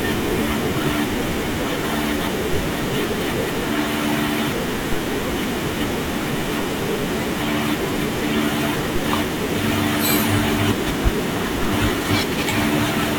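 At 2.53 s and again at 4.93 s there's a DC step: the waveform's zero line suddenly jumps by about -13 dBFS, then bleeds back toward centre as a roughly 5 Hz high-pass drains it. Each jump lands as a low thump under the speech.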